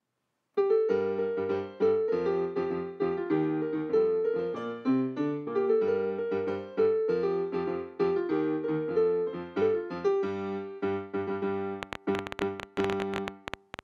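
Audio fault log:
11.83–13.80 s, train of clicks: a burst of roughly thirty sharp, near-identical pulses arrives at about 12.7 clicks per second, spaced unevenly, and continues to within a few hundredths of a second of the end. Each click peaks around 15 dB above the surrounding sound, so the run is heard as a clear, stuttering tick riding on top of the audio. The likely source is electrical interference from nearby equipment or a faulty connection or power supply.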